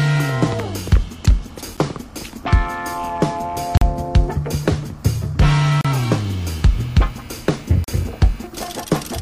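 Gaps between stream segments occur at 1.77 s, 3.77 to 3.82 s, 5.81 to 5.85 s and 7.84 to 7.88 s, roughly every 2 s, matching 2-second segments. At each boundary the timestamps leave a small hole, which the player fills with silence, adding about 9, 41, 35 and 37 ms. The sound stops dead and resumes with hard edges, like a brief dropout, yet nothing is actually lost.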